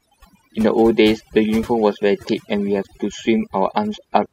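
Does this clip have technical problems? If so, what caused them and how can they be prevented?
Yes. Overdone noise removal runs throughout this speech: a noise reducer set too strong has cut individual frequency bands it judged to be noise, taking soft parts of the voice with them. The background drops and breaks up into twinkling specks. A noise gate silences everything at once, but this fault works band by band, which leaves that sparkling residue. To prevent it, use gentler reduction settings and check the result on quiet passages.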